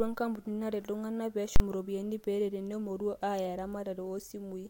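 At 1.56 s the speech is interrupted by invalid numbers at full scale: a calculation went infinite or invalid and was pinned to an extreme value for 40 ms, until 1.60 s. It is heard as one loud bang. The waveform shows a flat block far from zero, beyond the speech peaks, with broadband vertical lines on a spectrogram.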